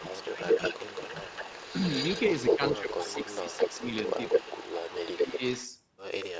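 A speech recording from a call in which the far end's echo canceller, running on a loudspeaker, likely failed to remove what its microphone picked up, so an echo leak sends a delayed copy of the voice back. From 0.0 to 2.73 s the copy trails by 214 ms at about the same level as the speech. From 2.93 to 5.68 s it trails by 220 ms at about 5 dB below. The result is a doubled, smeared sound.

The same canceller likely could not separate the talker from the returning loudspeaker audio while both sides were active. The resulting speech suppressed in double talk turns the voice down by about 5 to 10 dB at 0.0–0.46 s, 0.75–1.15 s, 2.56–3.61 s, 3.78–3.83 s, 4.39–4.5 s and 5.16–5.42 s. The longest dip, about 10 dB deep, falls at 2.56–3.61 s. These stretches sound like the voice briefly sinking away or losing presence mid-phrase. The call's microphone processing limits the audio to nothing above 8 kHz.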